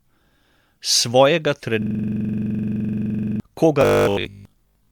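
Throughout, the speech has a swirly, hollow, smeared quality with softened consonant attacks, more than a single 128 kbit/s MP3 pass would cause. This points to generation loss, likely from several MP3 re-encodes, each quantising on a shifted frame grid so the damage accumulates.

From 1.82 to 3.40 s, a system hang loop repeats one 42.67 ms slice exactly, dozens of times. At a 23.4 Hz loop rate it sounds like a rapid machine-gun stutter, which fits a 2048-sample ring buffer cycling while the system was frozen. Unlike buffer repetition, the sound is frozen and no longer moves forward.

From 3.81 to 4.91 s, the speech becomes a rigid, metallic buzz locked at 50 Hz, yet it still loosely follows the speech. This is robotic sound from repeated short buffers: 20 ms chunks are repeated while most of the real audio is skipped, likely because new audio arrived too seldom.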